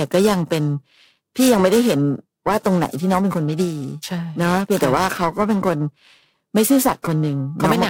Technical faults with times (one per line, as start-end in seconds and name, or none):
0.00-7.89 periodic clock jitter